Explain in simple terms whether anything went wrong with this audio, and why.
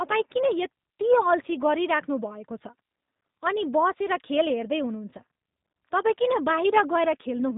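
Something did go wrong, for the whole clip. The speech passed through the G.729 codec, a phone-call squeezer. It rebuilds the voice from a rough model instead of keeping the real sound. Everything above about 3.8 kHz is gone, so it sounds muffled, rough and somewhat synthetic.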